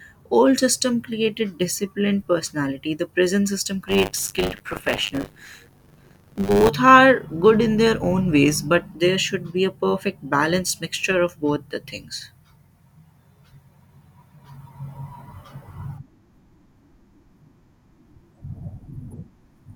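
From 3.87 to 6.69 s the speech takes on a robotic, rattling buzz at 100 Hz, riding on the signal itself rather than sitting underneath it. This is buffer tearing. The program filling the ring buffer and the hardware draining it have slipped out of step, so in each 10 ms period a small slice, around a sixth of it, is replaced with audio about 40 ms old. The hard joins at either edge of that stale slice produce the buzz.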